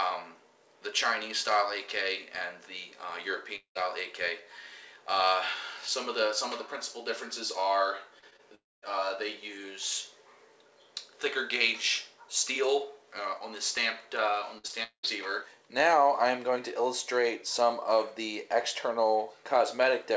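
The audio passes through a call path whose band stops at 8 kHz, which fits G.722 at 64 kbps. From 3.56 to 3.77 s and again from 8.55 to 8.84 s, the sound trails off into a fading continuation and then silence, about 0.11 s and 0.23 s of it respectively, before resuming further on. These are likely long network dropouts, set apart from brief concealment by that silent stretch and the lost material. Just before the second one, short concealed packet loss appears at 8.19 to 8.35 s, 8.30 to 8.33 s and 8.36 to 8.41 s, as quick smears of only tens of milliseconds that blend straight back, with no silence. From 14.58 to 15.07 s, repeated packet loss produces choppy sound: four gaps, the longest about 0.2 s, patched back to back so that concealment fills over half of that half-second span, rather than one isolated hole.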